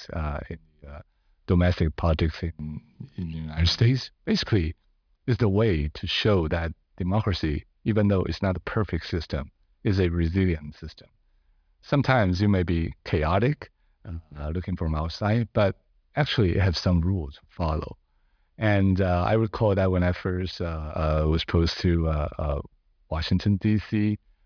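Speech recording with no audible technical faults.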